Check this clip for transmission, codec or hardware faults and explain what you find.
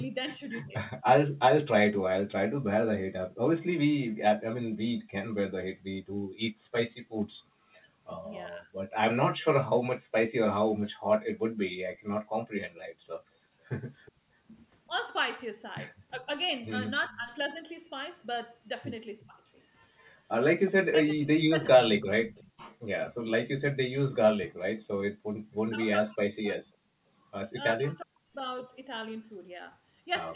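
Three kinds of echo-canceller fault appear in this speech, all tied to a loudspeaker in the call. The narrow band, with nothing above 4 kHz from the G.711 A-law path, is part of that codec.

Speech suppressed in double talk occurs at 0.05 to 1.02 s, 8.23 to 8.68 s, 14.87 to 22.33 s, and from 25.68 s to the end. The voice dips in pieces: deep cuts of about 40 dB in the first and last stretches, milder dips of about 15 dB in the middle two. The affected time adds up to under half a second early on and around a second and a half in the long stretch. The likely cause is the canceller mistaking the talker for loudspeaker echo while both sides spoke, then turning everything down.

Background gated by the echo canceller happens at 6.27 to 6.72 s, 10.70 to 10.86 s and 14.21 to 14.37 s. The room sound suddenly drops out, by about 40 dB in the first two and about 37 dB in the third, for roughly a third of a second at most. 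It returns when the gate releases. The canceller clamped the microphone hard while the loudspeaker was playing, taking the ambience with it.

An echo leak runs from 11.95 to 25.54 s. A faint delayed copy of the voice trails 366 ms behind it, about 20 dB below the speech. This is likely residual loudspeaker pickup that the far side's canceller failed to remove and sent back down the line.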